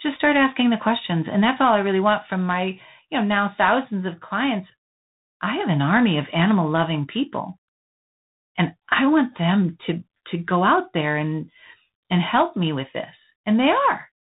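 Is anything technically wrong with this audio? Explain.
Yes. Tandem speech coding runs throughout the clip: the speech sounds like it passed through two ADPCM stages in a row, with an ordinary telephone link between them, which fits G.726 at 32 kbit/s either side of G.711. The second coder reprocesses the first's errors, so the audio sounds rough and noisy, with nothing above 3.8 kHz.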